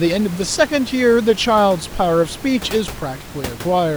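No technical faults can be heard in this recording.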